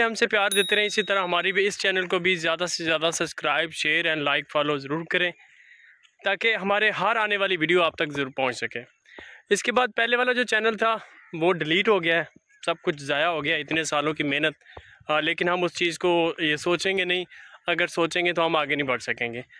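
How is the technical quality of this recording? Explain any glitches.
No glitches or technical faults.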